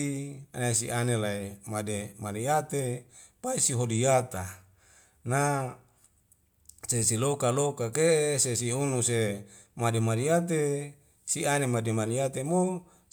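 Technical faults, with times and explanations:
No technical faults detected.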